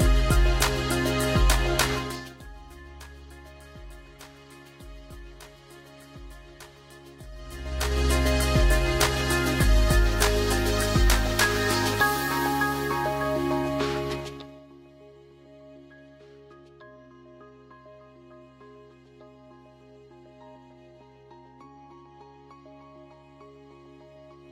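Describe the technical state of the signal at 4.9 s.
At 4.9 s the signal is intact, with no technical fault present at that moment.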